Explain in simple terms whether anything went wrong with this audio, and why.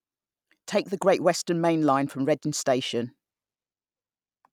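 Nothing went wrong with this audio; there is no fault to be heard anywhere in it.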